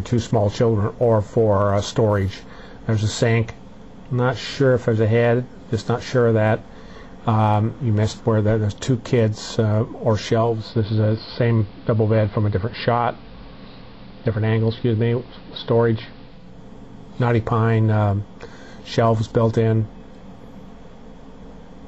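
Digital radio blending to analogue runs from 10.32 to 16.61 s. The receiver lost its digital stream and cross-faded over about 0.4 s to the station's AM broadcast. The sound turns duller, drops about 1 dB, and gains hiss roughly 30 dB down before blending back.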